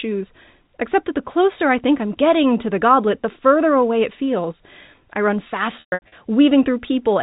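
Right after "it feels I run", from 5.8 to 6.12 s, packet loss with pitch repetition breaks up the speech. About 240 ms of audio is missing, scattered over 320 ms, with the longest gap 120 ms. The receiver repeats the last pitch period to fill each hole, so short gaps give a held, buzzy tone. The longest gap outlasts the fade and drops to silence before a quick cross-fade back. On a spectrogram, frozen, perfectly flat harmonic stripes appear under the 4 kHz ceiling of the G.711 telephone band, then a blank patch. On a waveform, identical repeated cycles shrink toward zero.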